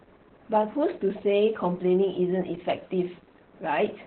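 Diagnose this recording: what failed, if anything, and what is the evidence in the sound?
Opus voice compression, present throughout the speech at the codec stage: nothing survives above about 4.3 kHz, and the voice sounds muffled, hoarse and slightly robotic. The sound points to Opus running its SILK linear-prediction coder in narrowband at a very low bitrate, around 8 kbps, with coarsely coded excitation.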